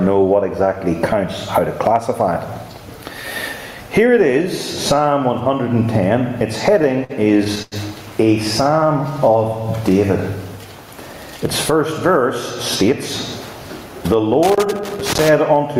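Throughout the clip there is gain pumping. The cause is likely input gain set far too high for the microphone, with a fast limiter or compressor hauling the level down whenever a loud sound arrives. The gain swings by roughly 20 dB. Loud and quiet passages sit unnaturally close in level, so the whole recording sounds squashed and breathing.

Between 6.79 and 7.74 s come repeated stalls, a stutter. Packets reached the receiver late or too slowly, and its jitter buffer kept running dry. Each time, the receiver stretched the last sound to cover the wait, fading it during the longer holds. There are eight such holds, adding up to about 204 ms of filled-in sound, the longest lasting 94 ms. Nothing is lost, but the passage drags and hiccups.

From 14.43 to 15.29 s a loose connector crackle breaks in. A worn or dirty contact is rapidly making and losing connection as it shifts, chopping the signal on and off, and any DC on the line turns those breaks into pops. 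It is heard as an irregular, scratchy burst of crackle lasting a little under a second.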